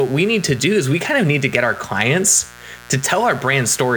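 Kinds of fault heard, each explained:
Mains buzz: Switching spikes from a dimmer, rectifier or unshielded line leak into the signal path twice per 60 Hz cycle, spraying harmonics up into the kilohertz range, so a steady, raspy buzz sits under the speech throughout, roughly 25 dB below it.
Hard clipping: A stage in the chain is driven about 4 dB past its limit, so peaks are sliced flat and high harmonics appear; from 1.30 to 1.55 s, just after "is we kind of", the speech turns briefly harsh and crackly.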